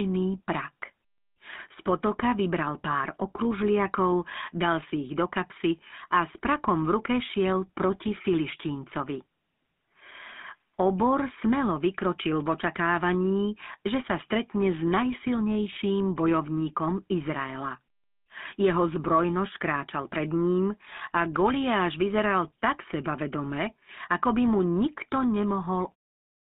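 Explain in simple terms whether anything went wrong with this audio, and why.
Yes, something went wrong. From start to finish the speech sounds buzzy, gravelly and boxed-in, like an old mobile phone call. That is the GSM full-rate codec, an early phone system that rebuilds the voice from a simple model of the throat and mouth driven by a rough pulse train, throwing away much of the detail. It also keeps only the range from about 200 Hz to 3.6 kHz, so the crisp top end is gone. The gentle fade-out at about 26 s is a smooth, deliberate ending.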